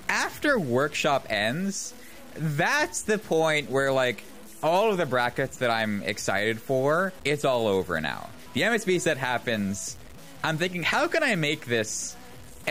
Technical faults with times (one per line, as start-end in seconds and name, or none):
0.00-12.71 low bit depth without dither
1.95-1.98 repeated frames